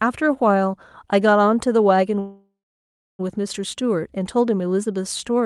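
From 2.19 to 3.21 s there is a call audio freeze: a fading buzz, then a 0.66 s flat waveform gap, likely from stalled packets emptying the jitter buffer.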